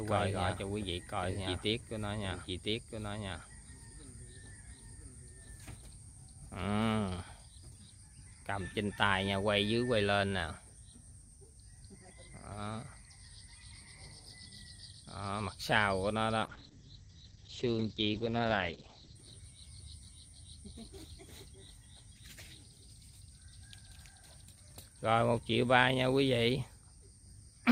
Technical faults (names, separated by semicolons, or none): doubled audio track; call bitrate drop